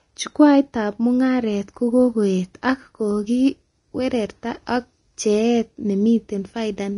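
From start to finish, the speech sounds hissy and grainy, with nothing above 10.6 kHz. The likely cause is Vorbis compression at a low bitrate, near 32 kbps, turning fine treble detail into noise.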